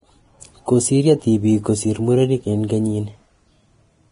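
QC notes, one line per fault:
Throughout: Vorbis compression, likely heavy, which fits a low bitrate around 29 kbps. The speech stops dead above 10.6 kHz, and the remaining treble is grainy and hissy. At this setting the encoder spends very few bits on the residue above its smooth spectral floor, so fine high-frequency detail is replaced by noise of similar energy. Sibilants turn rough and smeared, tonal parts sound coarse, and consonant attacks lose their crispness.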